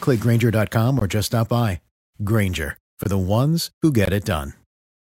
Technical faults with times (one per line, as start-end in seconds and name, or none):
0.99-1.01 gap between chunks
3.03 gap between chunks
4.05 gap between chunks